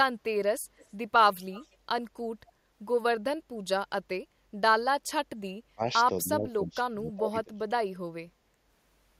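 At 0.77 to 0.90 s and again at 1.52 to 1.76 s there is an echo leak: a faint delayed copy of the speech arrives about 234 ms behind the original, roughly 30 dB down in the first burst and closer to 25 dB down in the second. It sounds like a delayed repeat trailing the talker. The likely cause is a far-end loudspeaker whose echo canceller let part of the microphone pickup through and returned it down the line.

From 5.59 to 5.82 s, and then for a longer stretch from 6.22 to 7.70 s, the speech is suppressed in double talk. The level sags by as much as around 30 dB, in a brief dip of about 0.2 s and then for roughly 1.5 s, so the talker fades and breaks up. This is likely an echo canceller that, with both ends talking at once, could not separate its own talker from loudspeaker echo and attenuated everything.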